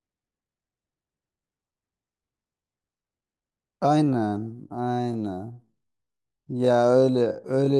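From 4.02 s to the end, the speech drops to half speed without any change in pitch, a time-stretched section. It was likely stretched by software that repeats short slices to pad out the length, which is why that stretch sounds oddly drawn out.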